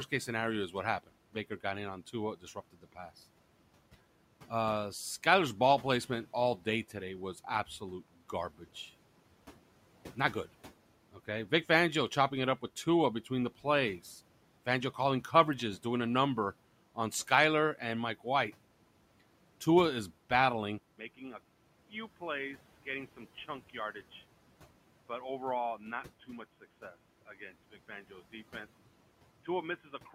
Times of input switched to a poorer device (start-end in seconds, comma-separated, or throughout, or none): 20.78-30.14